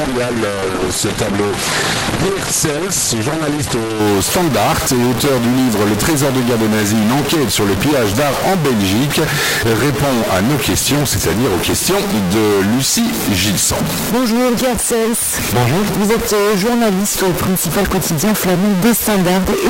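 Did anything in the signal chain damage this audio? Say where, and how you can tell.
Yes. Throughout, a distortion that follows the waveform rides on the sound and pauses fill with noise, unlike clipping. The likely cause is a stuck bit at the converter.

From 0 to 4.0 s nothing exceeds 12.1 kHz. Quality then jumps with no gap, unlike a dropout. This is an adaptive stream starting at a low bitrate.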